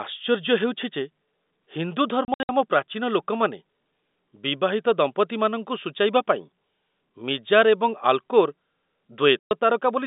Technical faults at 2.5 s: packet loss filled with silence

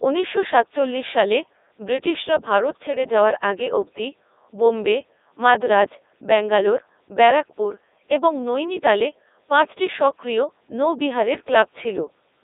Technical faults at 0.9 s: Codec 2 vocoder

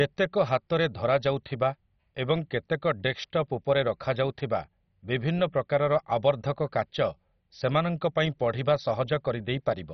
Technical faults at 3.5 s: MP2 compression

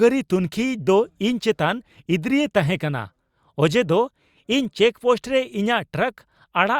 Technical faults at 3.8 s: none

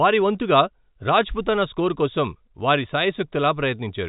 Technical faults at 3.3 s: none

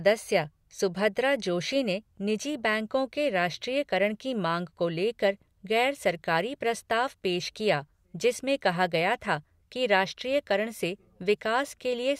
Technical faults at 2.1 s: none

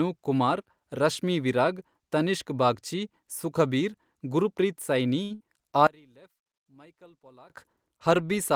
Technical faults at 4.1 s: none

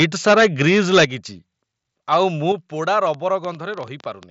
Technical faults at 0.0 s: microphone overload; microphone volume stepped down

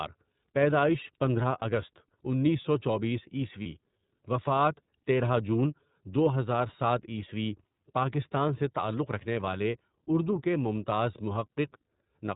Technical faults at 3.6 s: iLBC codec; lost iLBC frames

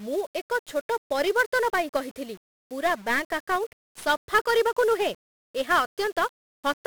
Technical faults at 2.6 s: 1-bit DFPWM compression

